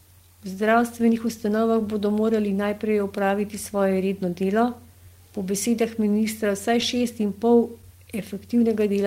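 From the start, there's clock drift between sender and receiver. The sending side's clock runs around 3 percent slow, so audio arrives a little slower than the receiver plays it out. The jitter buffer keeps drifting toward empty, and instead of one clean slip you get a steady pull that has to be patched over and over, giving the speech a faintly unsteady, slightly stretched feel.

Those patches are the repeated timing corrections, running from about 0.27 s to 8.68 s. To keep the buffer from running dry, the receiver keeps repeating short slivers of audio, all in the same direction but at uneven spacing. Together they add roughly a fifth of a second and bring the effective pace down to 98 percent. Each edit is tiny, so at most you hear slight hiccups and a tempo that wobbles rather than obvious skips.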